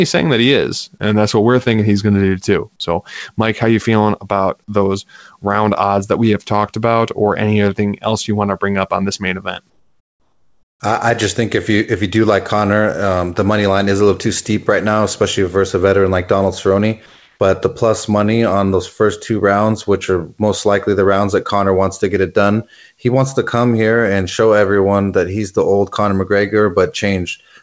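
Discontinuous transmission likely halted the stream in two pauses, and the receiver filled each with comfort noise instead of the real background. From 9.70 to 10.80 s, after "on this main event", a featureless hiss sits about 10 dB lower. From 17.06 to 17.40 s, before "the plus money on", the change is barely quieter.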